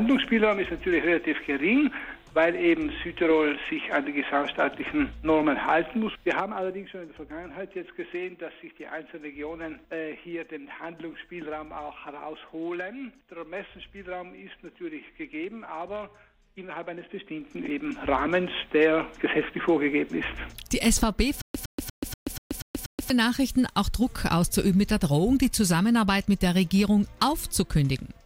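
At 6.02 s the level starts falling in coarse 2 dB steps, roughly seven per second, until about 6.98 s. It drops about 10 dB in all. This is zipper noise. Each unsmoothed step clicks, so a fast ticking rides on the sound.

It returns from 17.05 to 17.94 s. This time the level climbs about 10 dB, again in 2 dB jumps. The same zipping texture is audible while the gain moves.

From 21.42 to 23.10 s there is a stutter with silent gaps. A 112 ms fragment plays, then about 129 ms of dead digital silence follows. The cycle repeats every 241 ms, seven times. The likely cause is a stalled stream replaying its last fragment at each retry. The audio from that stretch is lost.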